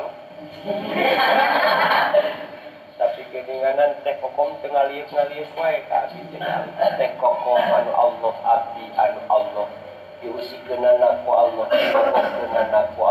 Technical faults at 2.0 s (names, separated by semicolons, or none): imaging from linear upsampling